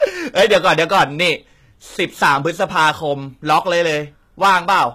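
From start to finish, the speech is pushed roughly 10 dB past what the signal path can carry, so every loud syllable has its peaks sliced flat: hard clipping. Only a few percent of samples hit the ceiling, but each flat top adds harmonics high in the spectrum, heard as a crackling, fuzzy edge on loud sounds. Soft saturation rounds peaks gently and warms the sound. This is abrupt and gritty, and it follows loudness exactly.

Also throughout, the treble sounds synthetic rather than simply dull. Sibilants come out metallic and lispy, upper harmonics don't sit in line with the lower ones, and nothing remains above 14.9 kHz. That points to a likely HE-AAC encode at a low bitrate, around 20 kbps, where the upper band is rebuilt by copying lower bands upward. A plain low-pass would just muffle. Here the top end stays bright but false.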